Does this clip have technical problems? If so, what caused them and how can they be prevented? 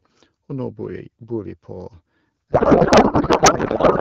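Yes. A codec payload misread starts at 2.51 s and runs to the end. Before that point the AMR wideband speech sounds clear, with only light coding damage, which fits a rate around 12.65 kbit/s. From 2.51 s the speech turns into garbled noise and warble that barely tracks it. The sender and receiver disagree on how the AMR bits are packed. This points to octet-aligned frames being read as bandwidth-efficient ones, so every field lands in the wrong place. Prevention means both ends negotiating and honouring the same AMR payload format.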